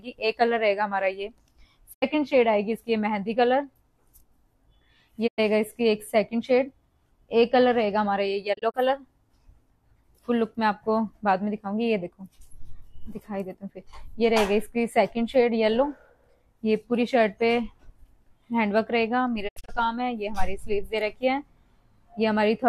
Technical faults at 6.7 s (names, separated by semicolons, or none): none